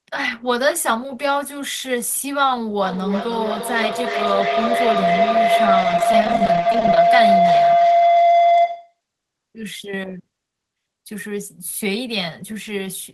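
From 2.83 s to 9.0 s, a feedback howl builds as the microphone-to-loudspeaker loop gains level each pass, settling near 700 Hz, pulsing about every 0.3 s, peaking about 7 dB above the speech.

Between 5.81 s and 6.97 s, repeated packet loss chops the speech into robotic fragments. Many gaps, none longer than 20 ms, are patched by extending prior sound, covering 28% of the span.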